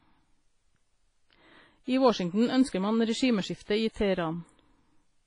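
Throughout the speech, the audio rings and smears, with a washy hiss that rises and falls with the signal and nothing above 10.4 kHz. The likely cause is heavy WMA compression at a bitrate near 24 kbps: long transform blocks spread quantisation noise and zero weak components.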